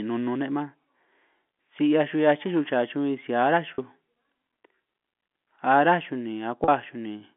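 At 3.74 s, just after "si ará", and again at 6.64 s, the speech briefly locks onto a held, slightly buzzy tone for about 40 ms. Both are packet loss with pitch repetition: the receiver filled each gap by looping the last pitch period and fading it, which fits two 20 ms packets lost each time. The gaps are short enough that the repeat never fades to silence before normal speech resumes over the narrow G.711 telephone band.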